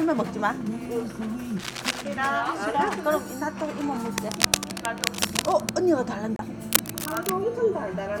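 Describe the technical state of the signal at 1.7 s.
At 1.7 s the signal carries cable scratch noise. It runs from about 1.59 s to 2.02 s, a little under half a second. Dense, uneven bursts of noise sit on top of the sound there. They come through as a brief scratching, rustling layer, only slightly quieter than the sound itself. The likely cause is a worn cable, connector or control being moved. Its contact resistance then jumps about rapidly and adds the noise.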